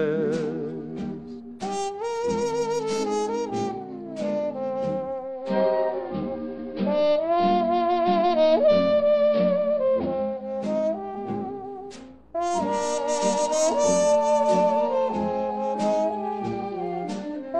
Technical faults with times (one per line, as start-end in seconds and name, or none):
5.18-10.60 digital radio blending to analogue